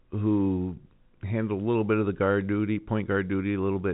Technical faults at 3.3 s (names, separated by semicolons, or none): none